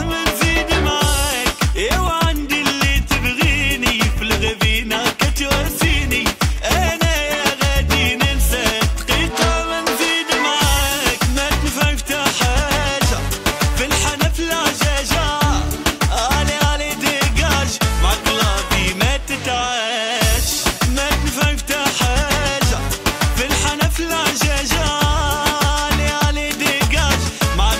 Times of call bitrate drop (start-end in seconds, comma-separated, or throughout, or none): none